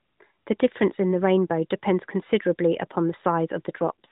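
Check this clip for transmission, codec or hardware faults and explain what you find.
One transmission fault is audible, on top of the narrowband mobile coding heard throughout. From 3.80 s to 4.11 s there is an AMR rate drop: the codec falls to a lower mode, with a roughness that points to roughly 4.75 kbps. The speech turns buzzier and more synthetic, but the band stays the same and nothing drops out, unlike packet loss.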